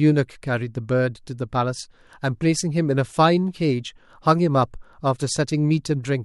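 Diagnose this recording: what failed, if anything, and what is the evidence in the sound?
Nothing failed: the speech carries no audible fault from any stage of the chain, capture through playback.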